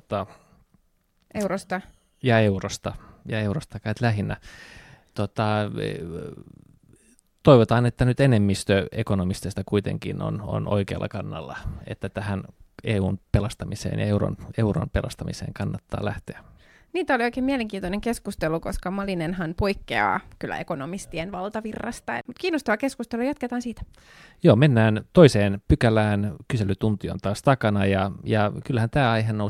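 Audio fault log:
No fault is heard in this speech clip.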